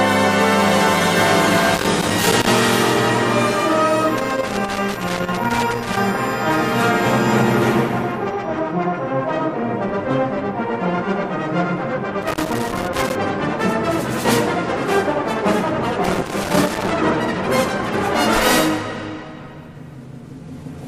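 Loose connector crackle breaks in at 1.74 to 2.48 s, 4.17 to 5.97 s, 12.22 to 13.15 s and 16.04 to 16.91 s. A worn contact keeps making and breaking. The signal is chopped, and each burst sounds like irregular scratching and crackle.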